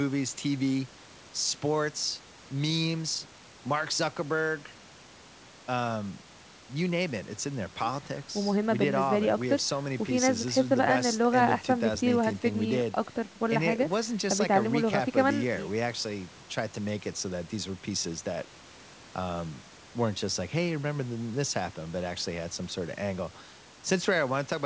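Nothing in this speech recording stands out as a technical fault. It has come through a WebRTC call path with the G.722 codec at 64 kbps, so nothing is heard above 8 kHz, and room noise sits about 32 dB below the speech.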